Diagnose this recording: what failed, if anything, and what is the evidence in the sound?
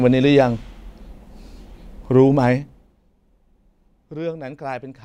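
Zipper noise from an unsmoothed gain stage at the buffer level. Between 2.50 and 3.01 s the level falls roughly 20 dB in 2 dB jumps, about twenty a second. Each jump leaves a small tick, so the fade zips instead of gliding.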